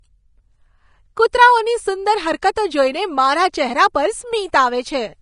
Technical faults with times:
0.00-5.22 Vorbis compression

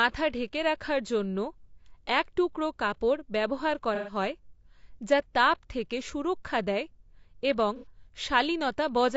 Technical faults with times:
0.00-9.16 low-delay AAC compression
3.95-4.15 AAC frame loss with concealment
7.76-7.86 AAC frame loss with concealment

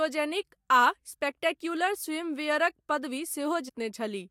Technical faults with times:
3.68-3.70 compressed frames skipped

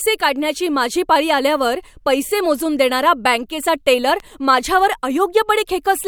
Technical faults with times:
4.10-4.22 loud pop

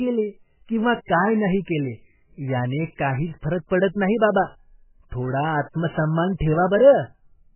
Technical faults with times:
0.00-7.55 MP3 compression

